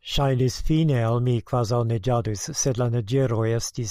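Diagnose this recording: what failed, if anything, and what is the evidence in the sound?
Nothing in this speech recording points to a failure anywhere along the chain, so there's no diagnosis to make.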